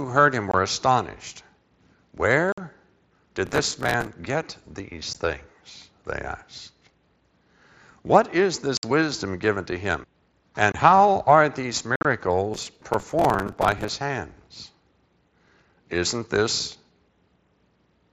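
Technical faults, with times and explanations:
0.51–0.54, 2.52–2.58, 5.13, 8.77–8.83, 10.72–10.75 and 11.96–12.05 s: unconcealed Bluetooth headset packet loss. Chunks of the headset-to-phone stream just vanish with nothing patched in, so you get sharp-edged holes from about 15 to 60 ms. The last one is a cluster of drops over about 90 ms that sounds choppy and crackly.
3.46–4.07 and 12.54–13.88 s: processor overload crackle. The machine keeps missing audio deadlines, dozens of them in a row. Each miss replays a sliver of old audio with hard edges, which fits buffers of around 5 ms. You hear gritty tearing laid over the mSBC-coded speech until the load eases.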